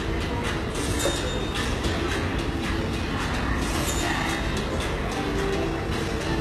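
Everyday sound recording, and the codec damage is plainly audible across the whole clip, most likely from HE-AAC compression at a very low bitrate, something like 16 kbps. The treble sounds synthetic, because only the lower band is really coded and the top is patched in by copying lower bands upward under a coarse envelope, so the upper detail doesn't line up with what sits below. There's also nothing at all above about 12.3 kHz.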